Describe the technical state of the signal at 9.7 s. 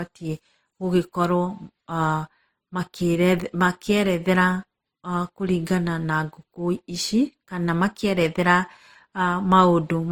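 At 9.7 s the speech carries two layers of artefacts at once, heard together, with nothing above about 20.2 kHz. The pattern runs through the whole clip and points to transcoding between lossy codecs, likely an MP3 encode near 53 kbit/s re-encoded as Opus near 24 kbit/s, with Opus spending its bits on the MP3 damage while adding its own.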